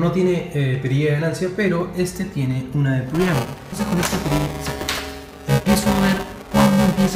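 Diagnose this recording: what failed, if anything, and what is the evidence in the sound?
Buffer tearing at the driver stage from 3.14 s to the end: writer and hardware reader slipped, so each buffer partly replays older audio, a robotic 345 Hz rattle that fits a 128-sample buffer.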